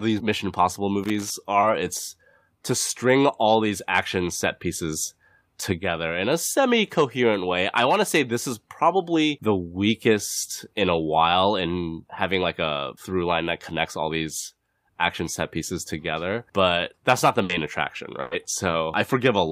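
Loose connector crackle runs from 1.03 to 1.30 s. A worn or dirty contact in the speech path makes and breaks as it shifts, chopping the signal into an irregular, scratchy burst of crackle.

Short concealed packet loss follows at 1.61 to 1.65 s. About 20 ms of audio arrived too late to decode, so the receiver extended the preceding sound across the hole and blended back in, leaving a brief smear or wobble.

A burst of packet loss comes at 17.43 to 17.51 s, right after "but that's not the". About 60 ms went missing, and the receiver stretched the last sound into a short held buzz or fading hiss. A second burst at 18.21 to 18.33 s covers about 100 ms in the same way. Each time, speech resumes further on and the audio in the gap is lost.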